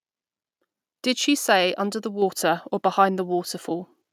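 At 2.22 s, right after "she say under the", there's a microphone volume step-up: the call software decided the mic was too quiet and bumped the input gain by about 4 dB in one go, so the speech and the background noise jump louder together, mid-sentence.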